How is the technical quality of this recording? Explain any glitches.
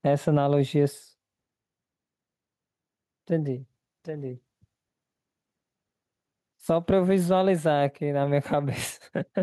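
The recording is compromised by gain pumping, present throughout the speech. The gain drops by around 10 dB each time a loud syllable arrives, leaving the level squashed and breathing. The likely cause is excessive input gain with a fast limiter or compressor clamping every peak.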